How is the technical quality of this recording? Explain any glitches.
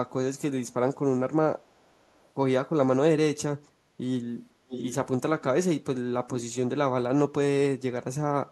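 The recording has one recurring problem, an echo leak, with four short stretches where a delayed copy of the speech comes back: 1.69 to 1.9 s, 2.14 to 2.26 s, 4.68 to 4.95 s and 6.29 to 6.43 s. The likely cause is a far end on loudspeaker whose echo canceller let some of its mic pickup through. The first two lag by 505 ms and are very faint. The later two lag by 568 ms and are much more prominent, roughly 10 to 15 dB below the speech.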